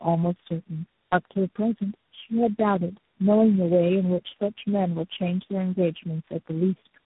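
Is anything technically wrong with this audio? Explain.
Yes. Throughout the speech, the sound is rough, muffled and warbly, with nothing above 3.8 kHz. This is tandem speech coding. The call was decoded and re-encoded at each link, and the compounded damage suggests about four low-rate speech codecs in series, each degrading the last one's output.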